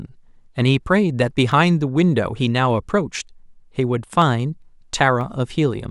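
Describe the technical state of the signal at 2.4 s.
At 2.41 s there's a single sharp click cutting across the speech, a thin vertical line top to bottom in the spectrum. That's most likely dropped samples: a tiny run, a fraction of a millisecond's worth, went missing, so the waveform leaps straight from one value to a later one. Nothing audible is actually lost in a gap that short; you just hear the abrupt step as that one click.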